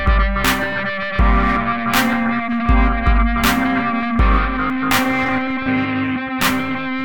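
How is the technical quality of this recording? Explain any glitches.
The recording has one audible glitch, a short discontinuity in the music at 4.7 s.

At 4.7 s there is a small forward jump in the music, with no gap of silence between the two sides. This is likely a dropped buffer (overrun): the capture software fell behind and the hardware overwrote a block of samples before they were read. Around 30 ms of material is missing, and the two sides are joined directly.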